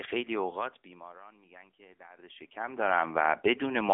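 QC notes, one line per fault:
throughout: AMR narrowband mobile codec. Speech is rebuilt from a vocal-tract model driven by sparse pulses, at a rate that fits about 8 kbps. The line passes only 250 Hz to 3.5 kHz, nothing remains above 3.6 kHz, and the voice sounds plainly buzzy and synthetic.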